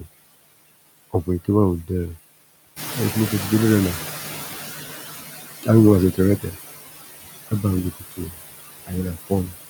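Across the whole speech clip, the background dips between words and swells beneath them. These are noise suppressor artifacts from band-by-band gain cuts of about 16 dB. From 2.76 to 5.15 s, after the room noise jumps by about 11 dB around the 3-second mark, the noise first comes through with less reduction and then fades. This is the noise suppressor catching up: its noise estimate takes about 2.4 s to adapt before settling at a cut of about 13 dB. Between 7.95 and 8.35 s, roughly a fifth of a second of speech sounds swallowed and faint, and again from 9.27 to 9.54 s for about a tenth of a second. In both spots, speech was cut by the noise suppressor, which mistook it for noise and pulled it down by as much as about 19 dB and about 18 dB.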